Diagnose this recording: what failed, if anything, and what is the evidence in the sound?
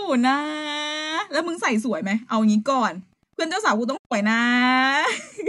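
Wi-Fi interference in the analogue wiring: from 2.86 s to the end, faint ticking every 102.4 ms, a nearby radio's beacon rectified by the circuit.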